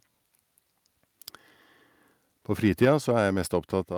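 The clip is speech. From 2.82 to 2.93 s the loudest syllable breaks into a harsh, crackling edge. This is microphone overload. The peaks run about 3 dB past the converter's limit, and a small share of samples lose their tops. The likely cause is an input volume set too high for the converter. At 2.85 s, inside that distorted burst, the voice and background drop suddenly by about 3 dB. At 3.84 s they drop again, by about 5 dB. Both are the microphone volume stepped down. The likely cause is call software reacting to the loud, clipped input and cutting the device gain in single steps.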